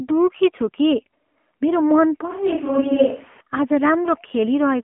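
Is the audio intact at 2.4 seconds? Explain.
No. At 2.4 seconds the speech sounds like a switch to a distant microphone, heard from 2.31 to 3.41 s. It turns suddenly roomy and hollow, with thinner bass. It is about 5 dB quieter, with more room noise underneath. The likely cause is a failed close microphone, leaving a farther one.

The AMR narrowband mobile codec also colours this moment, as it does the whole clip. Nothing above 3.6 kHz survives, and the band sits near 200 Hz to 3.4 kHz. Few pulses per frame make it plainly buzzy and synthetic, which fits a rate near 7.4 kbps.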